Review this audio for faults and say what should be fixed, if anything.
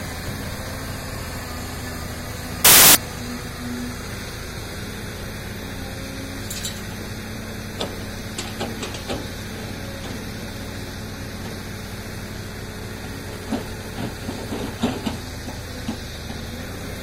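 From 2.65 to 2.95 s the audio turns into a burst of loud, harsh broadband noise lasting about 0.3 s. This is samples built from the wrong bytes: the reader assembled each sample from misaligned or swapped bytes, so the rapidly changing low-order bits landed in the high-order position and dominated every value. To prevent it, check byte order, sample width and frame alignment whenever the stream is parsed or resumed.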